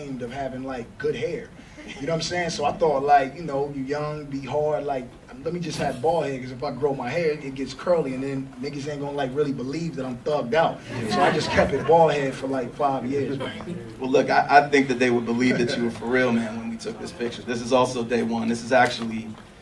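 Nothing in this audio stood out as a technical problem on listening.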